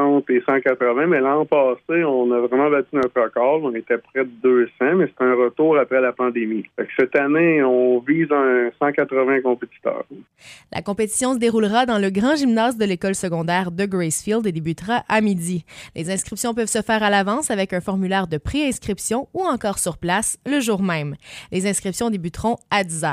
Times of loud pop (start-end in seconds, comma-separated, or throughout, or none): 3.03-3.05